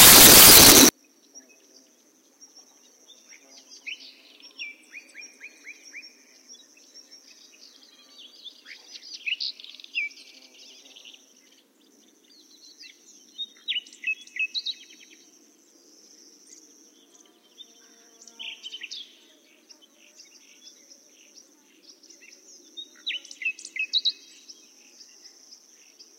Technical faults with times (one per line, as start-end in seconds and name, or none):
0.00-0.89 samples built from the wrong bytes